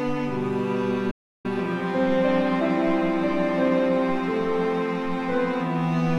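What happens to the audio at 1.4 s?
An audio dropout to silence runs from 1.11 s to 1.45 s, so at 1.4 s the music is still in a dead gap. The input was likely lost for about a third of a second, perhaps through a momentary disconnect or mute, while recording carried on writing silence. The music cuts off abruptly mid-flow into complete silence with no background tone, then resumes just after 1.4 s, and whatever played during those 332 ms is missing.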